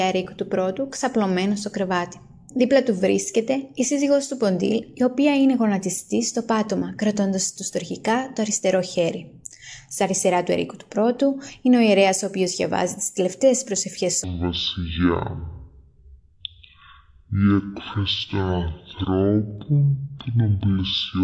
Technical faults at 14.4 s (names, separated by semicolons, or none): wrong sample rate